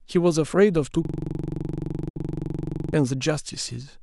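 From 1.05 s to 2.94 s a system hang loop takes over: the driver froze while the hardware kept replaying one ring buffer, so a 43 ms slice, which fits a 1024-sample buffer, repeats exactly about 44 times. At 23.4 Hz this gives a rough, rattling buzz rather than a stutter of varied fragments.

Inside that stretch, from 2.09 s to 2.17 s, a digital broadcast dropout mutes the sound for 64 ms after an 8 ms fade, consistent with two lost frames. Unlike the loop's repetition, this is true silence, and the audio then resumes.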